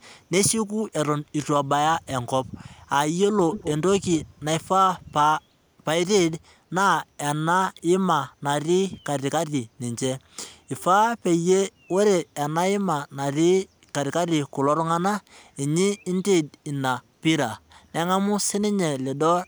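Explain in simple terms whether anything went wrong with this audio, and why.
Echo leak, 3.51 to 3.69 s: a faint, delayed copy of the speech comes back about 234 ms late, noticeably quieter than the original. This is likely a loudspeaker on the far end whose echo canceller let some of its own playback slip back into the call.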